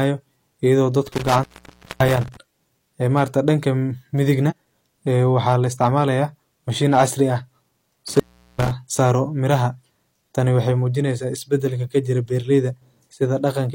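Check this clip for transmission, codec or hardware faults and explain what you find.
There are three separate problems here: a loose connection dropping the speech twice, four short bursts of peak clipping, and one spot where the decoder skipped ahead.

Intermittent contact shows up from 1.07 to 2.37 s and again from 8.08 to 8.71 s. A plug or cable briefly loses contact, so the speech cuts out for about 0.57 s and about 0.39 s, with crackle at each edge and faint hiss filling the gap.

Hard clipping hits at 1.31–1.39 s, 3.17–3.49 s, 5.37–6.01 s and 6.94–7.02 s. Peaks run about 2 to 4 dB past what a stage can pass, so they get sliced flat. The added high harmonics come through as crackle on the loudest moments rather than constant fuzz.

Compressed frames skipped occurs at 4.46–4.53 s. The audio jumps forward by around 50 ms, which fits one lost 46.4 ms frame.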